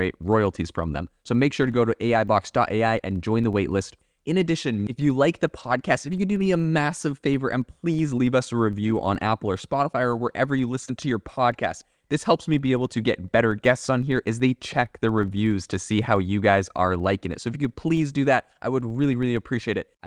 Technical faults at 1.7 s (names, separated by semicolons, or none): filter restarted on every block; lost packet rebuilt from error correction